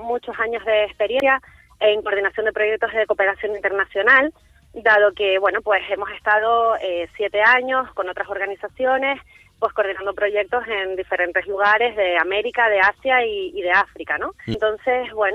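Two brief blips at 1.2 s and 14.54 s are damaged data in a compressed stream. Corrupted bytes there break the decoder's frame reading, so it loses sync and hunts for the next valid header, leaving a tiny glitch each time.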